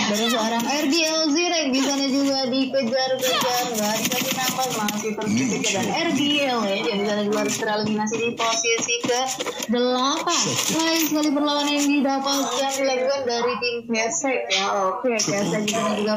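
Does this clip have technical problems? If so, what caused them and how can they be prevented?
Yes. From 10.57 to 11.22 s there are GSM signalling bursts: a galloping dit-dit-dit of short 217 Hz buzzes, roughly 25 dB below the programme. A nearby 2G handset's intermittent radio bursts are rectified by the audio circuitry. Keeping phones away from the recording chain or switching them off prevents it.

At 10.73 to 10.75 s there is damaged data in a compressed stream: a brief blip where corrupted bytes caused the decoder to lose frame sync and search for the next valid header. Error-checked transfer and verified file copies prevent this.

From 11.24 to 12.07 s the GSM phone buzz becomes continuous, a hard, raspy 217 Hz tone rich in harmonics at about 23 dB below the programme, as the phone's call-mode transmission bursts are rectified. Shielded, balanced cabling and distance from handsets prevent it.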